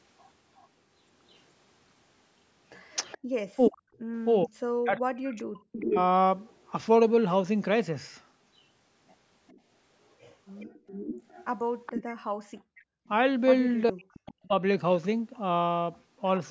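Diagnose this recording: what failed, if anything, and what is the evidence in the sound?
The echo canceller in the call processing, at the end using a loudspeaker, likely failed to cancel its own playback, and the residue was sent back. A delayed copy of the speech, lagging by 423 ms, is audible from 0.19 to 0.67 s, from 3.1 to 3.67 s, from 5.23 to 6.71 s and from 9.47 to 15.38 s. Its strength varies widely: barely there at first, clearer near 3.1 s, almost as loud as the direct speech around 5.2 to 6.7 s, and moderately loud through the long final stretch.

The same canceller also applied hard suppression to the microphone while the far-end loudspeaker was active, producing background gated by the echo canceller. The room tone drops by about 40 dB for roughly a tenth of a second from 3.18 to 3.27 s, and again from 12.34 to 13.06 s. Each time it falls close to silence and then snaps back when the canceller releases. 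This creates an audible pumping in the ambience that is not caused by anything in the room.

When both sides talked at once, the canceller could not tell the local talker apart from the echo and turned everything down, which is speech suppressed in double talk. This is the likely cause of the local speech dipping and breaking up within 3.55 to 5.98 s, about one and a half seconds of it in total, and again from 13.9 to 14.53 s. The deepest cuts are around 40 dB, enough to make parts of the speech briefly disappear.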